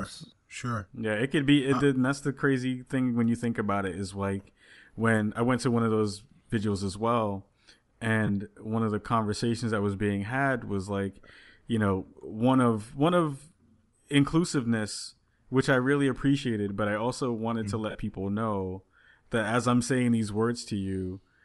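Speech with a breathy, grainy edge throughout and a noise-filled top end, plainly audible. This is likely Bluetooth LC3 compression, the LE Audio transform codec, zeroing much of the upper spectrum and filling it with noise, a level of damage that fits a rate near 48 kbps in 10 ms frames. Two brief smeared, noisy dropouts from lost LE Audio frames occur at 8.27–8.30 s, just before "one of the conversations", and at 17.90–17.95 s, just before "people know that as." They last 20 ms and 50 ms, which fits two and five 10 ms frames. In each, the decoder replayed the last spectrum with randomised signs instead of the missing audio.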